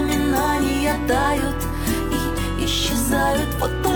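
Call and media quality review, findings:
No audible faults found.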